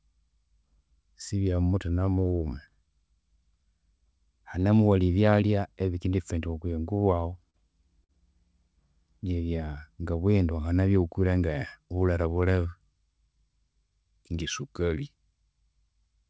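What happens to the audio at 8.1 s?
From 8.04 to 8.11 s there is a short stall from a late packet. A packet arrived too late, the jitter buffer ran dry, and the receiver held the last bit of speech for about 50 ms before resuming exactly where it paused. Unlike a dropout or a lost packet, nothing is skipped. One sound is simply drawn out with a faint buzzy or dipped texture, and everything after it lands 50 ms later than before.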